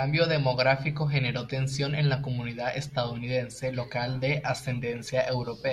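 There are no technical faults to describe at any point in the clip.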